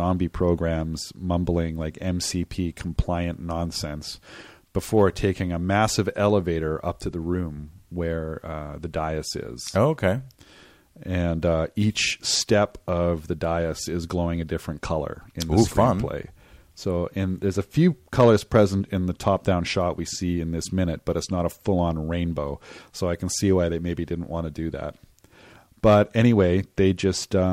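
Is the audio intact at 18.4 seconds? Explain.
No. Hard clipping runs from 18.20 to 18.61 s, between "and there's a few" and "in the". The speech drives about 4 dB past what a stage can pass. Its peaks are sliced flat. That adds high harmonics, heard as harsh crackle on the loudest moments.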